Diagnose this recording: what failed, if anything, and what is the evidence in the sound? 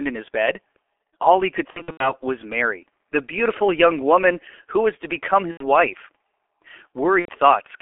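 The whole recording sounds muffled and hoarse, with consonants smeared together and nothing carried below about 300 Hz or above 3.4 kHz. This is the G.723.1 codec at the codec stage, running at 6.3 kbit/s and damaging the signal heavily. At that rate the coder describes the sound with a coarse vocal-tract model refreshed only every 30 ms frame, so quick transitions blur and the excitation takes on a rough, hoarse quality.

Three times the speech dissolves into a buzzy, stretched tone or coloured noise that fades. These are VoIP packet losses concealed by the speech codec, a failure at the network stage. Right after "he could", from 1.70 to 2.15 s, about 210 ms goes missing in bursts scattered over 300 ms, the longest lasting 90 ms. After "who was to become", from 5.51 to 5.64 s, 90 ms is lost, and another 90 ms from 7.19 to 7.29 s. The decoder fills each gap by extrapolating its last pitch and filter at decreasing gain, and the speech stays weakened briefly after packets resume.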